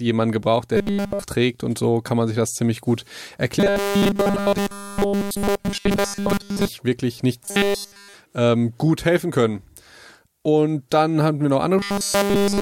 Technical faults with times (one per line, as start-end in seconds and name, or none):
0.77-1.24 robotic sound from repeated short buffers
3.60-6.67 robotic sound from repeated short buffers
7.45-8.14 robotic sound from repeated short buffers
11.78-12.61 robotic sound from repeated short buffers